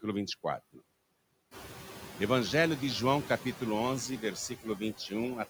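Throughout, a noise suppressor pulls steady background down by about 17 dB frame by frame. These noise suppressor artifacts leave residual noise that sinks between phrases and rises under the speech, even after the room noise rises about 12 dB near 1.5 s. From 4.49 to 5.12 s, the speech is cut by the noise suppressor, which mistakes it for noise and turns roughly 150 ms of it down by up to about 13 dB, leaving those parts swallowed and faint.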